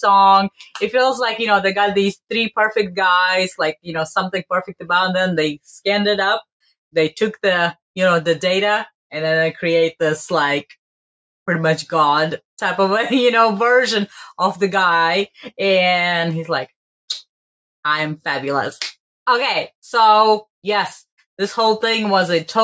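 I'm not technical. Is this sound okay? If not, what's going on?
No. Right at the start, from about 0.51 to 0.78 seconds, there's sound cut by the noise suppressor. The call's cleanup filter mistook a bit of real sound for background noise and turned it way down, so for roughly a third of a second it goes noticeably quieter.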